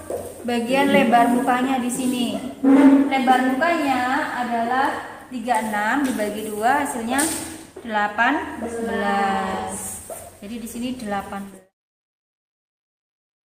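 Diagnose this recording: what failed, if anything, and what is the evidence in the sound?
Nothing here has failed; the only change in level is the smooth, editor-style fade-out that starts around 11 seconds and finishes at 11.73 s, with no click or hard edge.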